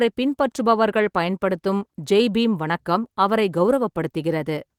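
Nothing is technically wrong with this speech recording, and its Opus voice compression is working as intended.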